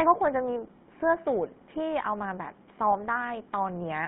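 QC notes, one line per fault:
Throughout: GSM full-rate codec. The speech sits in a 150 Hz to 3.6 kHz telephone band with a plainly audible buzzy, gravelly roughness from pulse-driven vocal-tract modelling at a rate that fits 13 kbps. Plain band-limiting alone would sound muffled but clean, not rasping.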